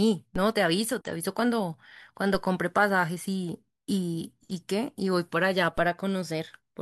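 DC steps occur at 0.36, 2.35 and 5.78 s. At each, the waveform's zero line jumps by about -28 dBFS (about -27 dBFS at the last), then settles back as a 5 Hz high-pass drains it, producing a brief low thump beneath otherwise continuous speech.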